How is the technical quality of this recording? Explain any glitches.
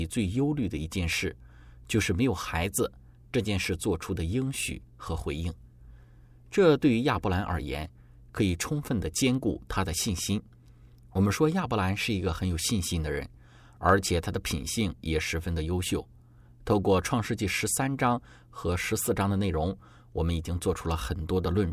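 No technical faults or glitches can be heard anywhere in the recording.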